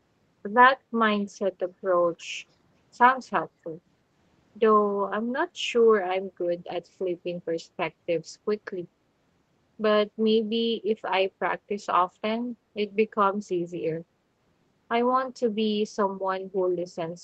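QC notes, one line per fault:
2.2–2.25 s and 3.43–3.47 s: echo leak. An echo canceller on a loudspeaker end likely let its microphone pickup through, so brief scraps of the speech return 292 ms late: quieter at first, about 35 dB down, then plainer at about 20 dB below.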